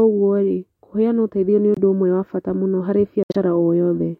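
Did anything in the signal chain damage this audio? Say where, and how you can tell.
Yes, at the codec stage: corrupt frame muted. Sharp-edged silences at 1.74–1.79 s, after "kũheana ũteithio nĩ", and at 3.23–3.36 s, after "wa bata mũno harĩ", appear as blank vertical slots on a spectrogram and flat waveform gaps. That fits the decoder rejecting damaged frames and the player inserting silence, with timing kept.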